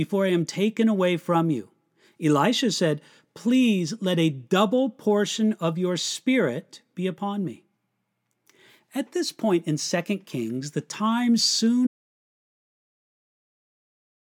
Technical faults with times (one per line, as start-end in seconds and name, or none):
11.87-14.20 audio dropout to silence